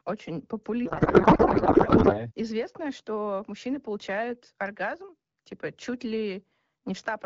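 A speech recording carried over AMR wideband (HD Voice), with a clarity that fits a rate around 12.65 kbit/s, suffers a codec payload misread from 0.85 to 2.18 s. There the speech gives way to garbled noise and warble that barely tracks it, which points to octet-aligned AMR frames being unpacked as bandwidth-efficient, so every field is read from the wrong bit position. Clear speech returns once both ends agree on the framing again.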